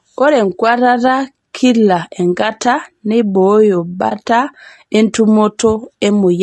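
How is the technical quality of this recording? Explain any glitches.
The recording has two faults. One runs through the whole clip, and one is a brief dropout.

Throughout the speech, plainly audible damage fits low-delay AAC compression, likely AAC-ELD at a low rate near 32 kbps. Its short frames resolve pitch harmonics poorly. Noise fills the gaps between harmonics, so the voice sounds rough and grainy.

From 4.09 to 4.12 s there is an AAC frame loss with muting. The decoder zeroed the spectrum of what sounds like one 20 ms frame. The overlapping windows fade the sound out and back in. The result is a brief dip.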